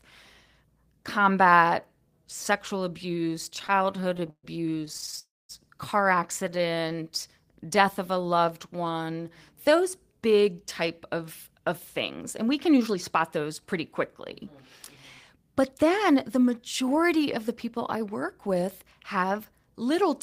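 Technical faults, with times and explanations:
3.49–5.19 s, repeated stalls (stutter): Right after "combat sexual abuse" the sound drags and catches 28 times. Packets were arriving late or more slowly than they were played, so the jitter buffer kept running dry and the receiver stretched the last sound forward until it could continue. About 395 ms is filled this way, roughly a quarter of the span, and the longest hold is 132 ms. No audio is missing, only delayed.
5.19–5.51 s, call audio freeze: Immediately after the stutter the sound holds, fades, and then drops to silence for about 0.22 s before picking up where it stopped. The likely cause is packets held up in transit, emptying the jitter buffer. The receiver bridged the 300 ms wait by continuing the last sound until it faded, and the playout delay grows by 300 ms. Nothing is lost, but a gap is inserted.
6.48–6.95 s, repeated stalls (stutter): Nine brief catches, each 12 ms or shorter, totalling 88 ms and about 18% of the span. 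The buffer again briefly ran short, and each gap was bridged by extending the preceding sound. The audio drags and stutters.
6.44–9.81 s, jitter buffer slow-down: Leading into "big type of", the audio plays at about 93% speed with unchanged pitch, adding 229 ms. To rebuild its reserve after the underruns, the buffer repeated single pitch periods and slices of pauses many times in a row. Sounds are drawn out and the delivery feels sluggish.
11.51–13.74 s, jitter buffer speed-up: After "big type of", the audio runs at about 106% speed with no pitch change, shedding roughly 0.15 s. The buffer was holding more than its target, as happens after delayed packets arrive together, so the receiver cut short pieces of one or a few pitch periods repeatedly to catch up. The delivery sounds slightly hurried.
15.36–20.10 s, jitter buffer speed-up: A second, gentler catch-up at about 104% speed removes roughly 0.2 s through the same trimming of pitch periods. 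The pace is faster than natural while the pitch stays put.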